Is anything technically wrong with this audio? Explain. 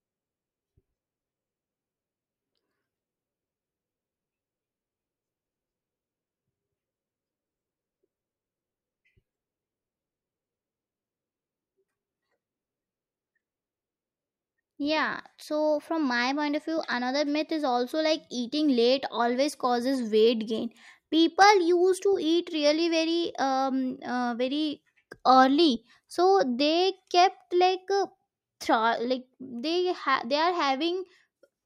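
No, nothing technically wrong can be heard here.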